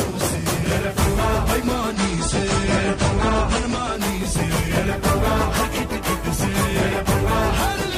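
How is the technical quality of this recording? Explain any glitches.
There is one clear glitch, a temporary loss of fidelity. Adaptive stream at a lower bitrate, from 1.95 to 3.95 s: the player switched to a cheaper version of the stream when the connection slowed, then switched back. The change is abrupt and gapless. For those two seconds nothing above about 9.7 kHz survives, so the top end goes dull and coding artefacts rise. That fits a step down from about 96 to 32 kbit/s AAC.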